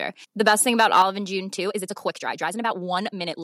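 From 0.47 to 1.02 s the speech shows microphone overload: the loudest peaks exceed the converter's ceiling by about 5 dB and are flattened, with a small fraction of the samples, around one or two percent, squared off at the converter's limit. The likely cause is an input gain set too high ahead of the converter. On the strongest syllables this sounds like a hard, crackling grit riding on top of the voice, while quieter stretches pass cleanly.

At 1.02 s, immediately after the distorted passage ends, the microphone volume is stepped down: the whole signal, voice and background together, drops by about 5 dB in a single abrupt step rather than a gradual fade. This is most likely the call software's automatic gain control reacting to the clipping it just detected and lowering the device's input level at once. The result is a sudden, audible dip in loudness with no change in the character of the room.

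From 1.54 s through to the end of the clip at 3.43 s there is a time-stretched section: the speech plays back about 1.57 times faster than before, yet its pitch is unchanged. This is likely a stretching algorithm compressing the audio to fit a shorter duration by discarding short overlapping segments. The pace jumps abruptly, and the speech turns rushed.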